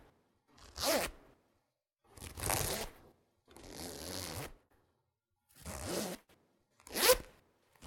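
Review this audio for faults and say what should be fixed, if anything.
Nothing stood out on listening to these sounds, so there is nothing to fix.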